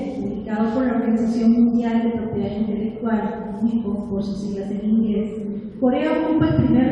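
Nothing in the recording stood out as a technical problem on listening.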